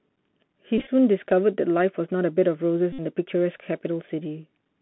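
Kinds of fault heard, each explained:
Bluetooth CVSD headset codec: The whole clip sounds thin and boxed in, with a granular hiss under the speech and audible gritty distortion where the sound gets loud or bright. The sound is confined to roughly 150 Hz to 3.4 kHz, which fits a 64 kbit/s CVSD link. That codec sends one bit per sample, saying only whether the waveform goes up or down, so its adaptive step cannot keep pace with fast, loud changes.
Bluetooth headset packet repeated: Two short buzzy stretches break the speech, at 0.78 to 0.89 s and at 2.93 to 3.00 s. The first is patchy, with about 64 ms of damage scattered across roughly 98 ms and runs no longer than around 15 ms. The second loses 60 ms within about 74 ms. Voice packets were lost between headset and phone, and the chip replayed the previous packet each time. Repeating every 3.75 ms produces a buzz near 267 Hz.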